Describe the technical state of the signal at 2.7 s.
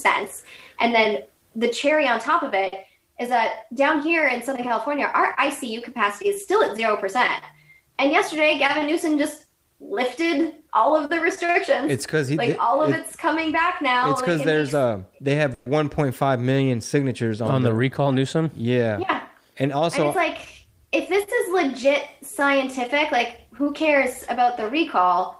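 At 2.67 to 2.74 s the sound briefly hangs, one moment held about 50 ms too long with a faint buzzy smear, then carries on with nothing skipped. This is a short stall from a late packet: the jitter buffer ran dry, the receiver stretched the last audio until the packet arrived, and playback resumed from the same point, about 50 ms later.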